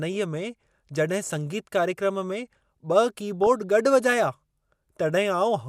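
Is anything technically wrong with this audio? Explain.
Yes. There is DAB burbling in this speech clip from 3.44 to 3.47 s. Weak reception let bit errors slip past the error protection into the MP2 audio stream, corrupting sample values and scale factors. Individual sub-bands then jump in level for up to a frame. The short burst points to a handful of damaged frames, consistent with a bit error rate of around a tenth of a percent.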